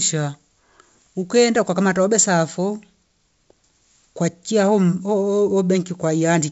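Nothing stood out on listening to this speech, which carries the bandwidth of G.722 wideband telephone coding at 64 kbit/s, with no content above about 7.7 kHz.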